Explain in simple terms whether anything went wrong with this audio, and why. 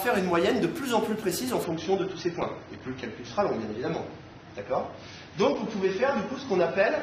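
At about 1.64 s the sound suddenly turns duller and smeared, and it stays that way to the end of the clip. Everything above roughly 6.3 kHz disappears, so crisp, bright detail is gone, and there is no gap or dropout at the switch. This is an adaptive stream at a lower bitrate. The player likely switched to a much more heavily compressed copy of the same audio when the connection slowed.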